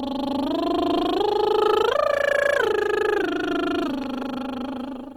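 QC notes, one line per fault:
Throughout, Opus compression: the music was likely encoded with Opus in its CELT music mode at a low rate, around 24 kbps. Starved bands get filled by folding or noise, so tones sound plainly grainy and rough, though bandwidth still extends to about 20.2 kHz.
2.56–2.68 s and 4.04–4.24 s, loud pop: a sudden voltage step or pulse, likely from a plug, switch, static or driver glitch, was added to the signal. Each time it is heard as two sharp pops in quick succession, about 5 dB above the music, which continues underneath.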